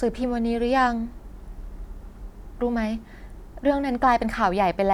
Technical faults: none

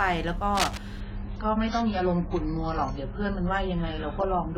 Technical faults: cable scratch noise; adaptive stream at a lower bitrate

